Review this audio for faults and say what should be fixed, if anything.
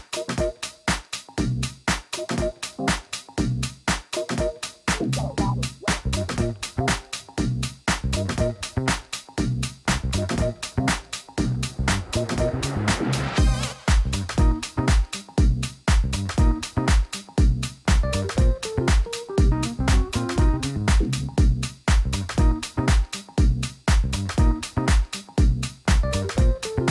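No faults turn up in this audio, so nothing needs to be fixed.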